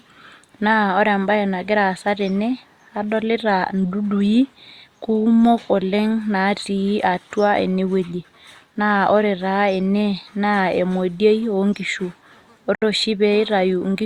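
At 12.75 s the speech drops out abruptly to silence for about 71 ms, then resumes at 12.82 s, carrying on from where it cut off. This is a Bluetooth stall, and the likely cause is radio interference holding back packets on the wireless link: the headphones' small playback buffer emptied before fresh audio arrived, so output simply halted until the retransmitted packets came through and playback could restart.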